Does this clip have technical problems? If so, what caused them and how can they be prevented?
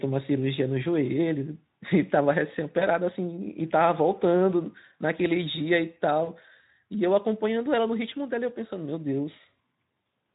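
Yes. VoIP packet loss concealed by the speech codec: packets dropped at 2.79 and 6.23 s, so the decoder stretched the last sound into a brief fading buzzy tone or coloured noise lasting until 2.86 and 6.31 s. Prevent it with a steadier network link, a deeper jitter buffer, or forward error correction.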